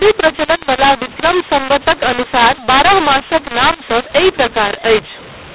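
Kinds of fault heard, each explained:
mu-law and A-law mixed up: mu-law coded speech was decoded as A-law, scrambling sample levels, so it sounds harsh and distorted throughout, with noise filling the pauses.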